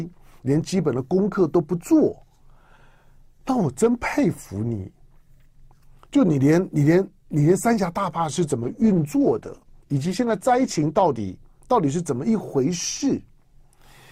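A call bitrate drop hits at 8.65 s: the bandwidth estimate collapses and the encoder is pushed from a rate that sounds like about 128 kbps down to one that fits roughly 14 kbps, holding there for about 2.4 s. Starved of bits, the codec quantises far more coarsely and discards the upper frequencies, so the audio turns muffled and rough with a watery smear until the rate recovers near 11.11 s.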